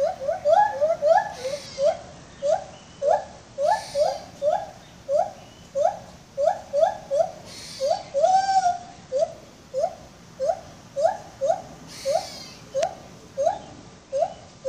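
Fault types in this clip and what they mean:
Bluetooth SBC bit pool drop: the wireless link came under strain and the sender cut the SBC bit pool to keep the stream going, which fits a fall from 31 to 11, about 83 kbps. With so few bits, the top sub-bands get few or none and the rest are coarsely quantised. From 1.66 to 3.60 s, 7.90 to 9.31 s and 13.47 s to the end, the treble goes dull and a gritty noise rises.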